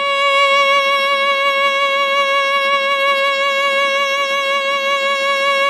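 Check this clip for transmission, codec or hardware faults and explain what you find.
One fault runs through the whole music clip: MP3 compression, likely at a starved bitrate. The damage is plainly audible and fits roughly 64 kbps. Short of bits, the encoder drops weak frequency lines that flicker between frames, leaving a watery, swirling texture with smeared attacks.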